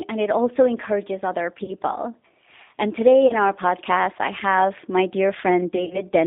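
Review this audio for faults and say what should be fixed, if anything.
G.729 codec damage runs through the whole speech clip, and the sound fits G.729A at about 8 kbit/s. The decoder rebuilds each 10 ms frame from a vocal-tract filter, a pitch predictor and a few sparse pulses rather than the actual waveform, so the speech is intelligible but rough and synthetic. The line passes only about 250 Hz to 3.7 kHz. On a spectrogram, energy stops sharply at 3.7 kHz with an empty band below 250 Hz, and harmonics look grainy and unsteady from frame to frame.

VoIP packet loss concealed by the speech codec occurs at 1.64 to 1.73 s (about 40 ms missing), at 3.28 to 3.33 s (about 20 ms) and across 5.76 to 6.04 s, where about 80 ms is lost in scattered gaps over roughly 220 ms, the longest run being 50 ms. Each time, the decoder repeats its last pitch and filter at falling gain, so the speech turns into a brief buzzy tone or coloured noise that fades. 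Recovery afterwards is slow because each frame builds on the previous one. On a waveform this shows as a decaying envelope. On a spectrogram, harmonics smear flat and dim before the normal texture returns.

To prevent this, use a wideband codec at a higher bitrate and carry the call over a link with less loss, adding jitter buffering or forward error correction.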